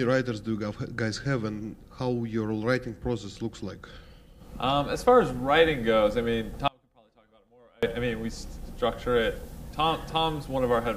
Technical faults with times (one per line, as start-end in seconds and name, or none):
6.68-7.83 audio dropout to a faint residue